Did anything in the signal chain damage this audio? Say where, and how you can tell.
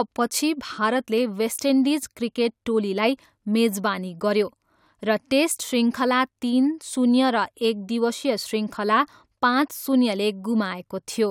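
No, nothing in the chain damaged it.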